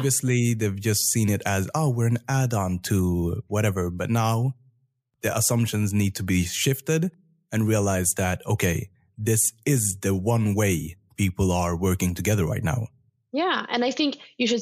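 Nothing goes wrong anywhere in this recording, so there's no technical fault to point to at any moment.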